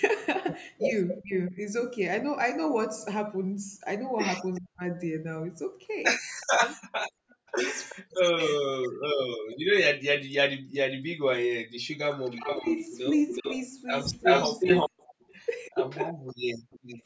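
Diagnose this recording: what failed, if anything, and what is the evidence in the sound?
The speech repeatedly dips and breaks up when both ends talk, which points to speech suppressed in double talk in the call processing. This likely comes from the echo canceller failing to separate the near talker from loudspeaker echo and attenuating both. It happens at 1.19–1.57 s (about 25 dB down, a fraction of a second in total), across 4.59–12.65 s (about 40 dB, roughly two seconds in pieces), and at 15.7–16.68 s (about 40 dB, under a second). On a spectrogram these show as ragged holes in the speech energy.

Echo leak from the far side's loudspeaker path is also audible: a copy of the speech returns 376 ms late. It appears as a brief scrap at 1.47–1.51 s, then at 4.55–7.93 s about 25 dB below the speech, and at 11.0–16.79 s at roughly equal level. The echo canceller's residual suppression is likely missing there. 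A spectrogram shows the same harmonic patterns repeated 376 ms later, faint at first and then as strong as the original.

The background is gated by the echo canceller at 7.1–7.46 s and 10.55–11.81 s. The room sound plunges by about 40 dB for a few hundred milliseconds each time while the loudspeaker plays, then returns. The canceller is clamping the microphone hard. On a waveform the noise floor between words collapses to near silence and then steps back up. On a spectrogram the broadband haze under 8 kHz, the call's normal bandwidth limit, blanks out.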